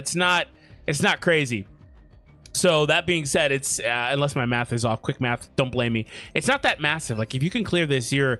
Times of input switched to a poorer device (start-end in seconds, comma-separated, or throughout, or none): none